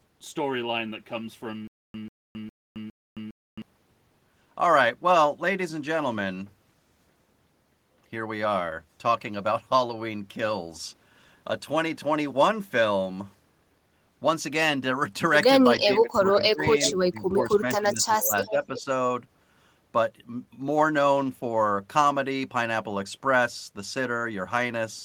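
From 1.67 to 3.62 s there is a stutter with silent gaps. A 0.14 s burst repeats four times, every 0.41 s, with 0.27 s of digital silence between. A stalled stream replaying its last fragment is the likely cause.

From 15.83 to 18.88 s, speech is suppressed in double talk. The speech dips by up to about 15 dB, for roughly two seconds in all. An echo canceller ducking both overlapping talkers is the likely cause.

Within that span, echo leaks at 17.39 to 17.46 s, 18.46 to 18.51 s and 18.76 to 18.82 s. A 354 ms delayed copy returns, first about 10 dB, then about 20 dB below the speech. Uncancelled loudspeaker pickup is likely.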